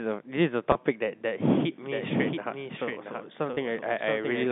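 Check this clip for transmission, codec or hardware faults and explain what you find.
Two kinds of fault are present, heard over a G.711 telephone line whose narrow band is audible throughout.

Packet loss with pitch repetition at 0.72–0.75 s and 3.54–3.57 s: each 30 ms gap, which fits one lost packet, is bridged by a repeated pitch period, giving a brief held buzz.

Doubled audio track from 1.91 s to the end: a second full-band copy, about 5 dB quieter, trails about 0.7 s behind without room colour, likely from a slower capture path.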